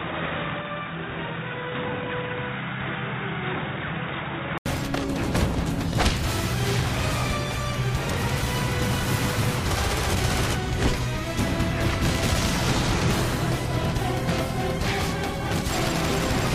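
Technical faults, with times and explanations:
0.0 to 4.66 s, input switched to a poorer device: the sound is dull and boxy, with nothing above 3.8 kHz, somewhat quieter and carrying a faint noise floor of its own. At 4.66 s an 80 ms silence precedes full, clear sound. This likely comes from a change of capture device, not a filter or codec bandwidth drop, because tone, level and background noise all change together, with a gap at the switch.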